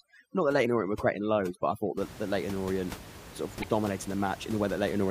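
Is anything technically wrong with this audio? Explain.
Yes, this speech clip has two kinds of fault.

From 0.0 to 1.97 s, overdone noise removal switches off frequency bands near the noise estimate. The background collapses into twinkling specks. On a spectrogram, isolated blocky islands float in black gaps.

At 0.62 to 0.66 s and again at 3.59 to 3.64 s, damaged data in the compressed stream makes the decoder lose sync, producing a brief glitch. On the waveform, each appears as a short discontinuity; on the spectrogram, as a thin broadband smear.

Beyond 1.97 s, room noise can be heard about 16 dB below the speech.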